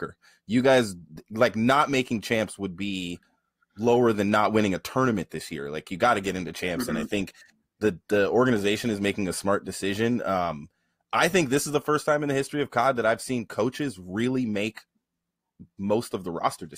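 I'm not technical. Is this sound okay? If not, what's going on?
No. From 6.17 to 8.17 s the speech suddenly gets rougher, with more digital artefacts and no gap: an adaptive stream at a lower bitrate, likely from a slowed connection.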